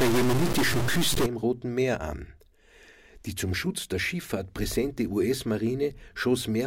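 Speech opens with harsh, buzzy distortion from 0 to 1.26 s, likely a stuck bit, with errors of about -20 dBFS. Unlike clipping, the distortion isn't confined to peaks: quiet gaps also fill with noise that flips with each small sign change.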